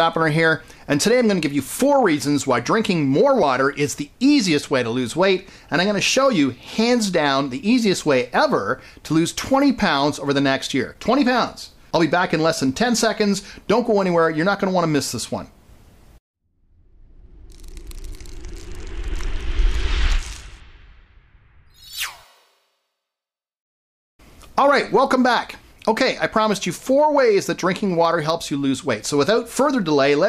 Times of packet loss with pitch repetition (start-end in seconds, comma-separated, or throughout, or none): none